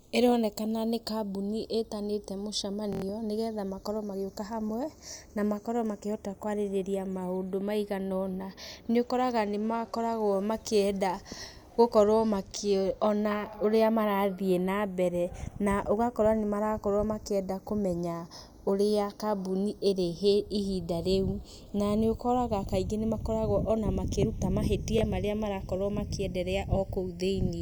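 From the start, the channels drift apart by roughly 30 ppm, reaching under half a millisecond by the end. In mono this gives slow flanging, seen as comb notches creeping through the spectrogram.

From 2.93 to 3.02 s, just before "nĩgetha makorwo magĩũka hamwe", a repeated buffer plays one 23.22 ms block four extra times, fitting a 1024-sample buffer. It sounds like a stutter that loses about a tenth of a second, and the waveform shows identical blocks with hard steps at each join. From 24.99 to 25.01 s, after "ona makĩrũtwo", the block repeats once, giving a brief stutter.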